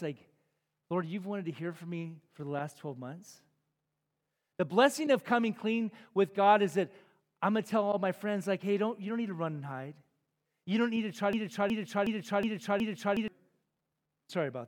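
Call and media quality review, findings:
Broken-record loop, 11.33–13.28 s, directly after "don't need to try". A 0.37 s fragment replays exactly, five times back to back; the speech due in that span never arrives. Likely a stalled player or encoder re-sending its last held buffer. Spectrogram: identical 0.37 s blocks tiled across the span, with abrupt seams at each restart. Waveform: the same envelope copied end to end.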